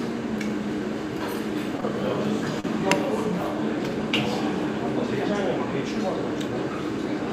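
At 1.80 s and again from 2.60 to 2.66 s, the audio briefly hangs as a short stall from a late packet. The jitter buffer ran dry, so the receiver stretched the last sound, by 16 ms and then 39 ms, and resumed exactly where it left off. Unlike a dropout, nothing is skipped and there is no silent gap. The sound is held too long, and everything after it arrives slightly later.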